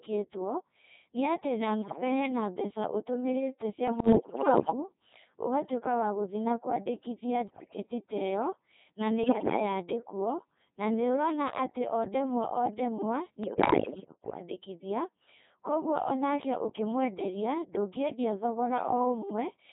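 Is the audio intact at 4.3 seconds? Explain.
No. From 3.88 to 4.72 s, bit errors on digital voice radio flip roughly 7 percent of the bits reaching the vocoder. Each corrupted bit resets a whole frame's pitch, level, voicing or spectral shape, so the synthetic speech lurches in pitch and loudness and breaks into bleeps, warbles and robotic gibberish.

This sits on top of a Codec 2 vocoder running throughout, with heavy damage that fits a rate near 2.4 kbit/s. Only pitch, energy, voicing and an envelope are sent, and the decoder rebuilds the speech from sine waves, which gives the robotic, buzzy tone heard there.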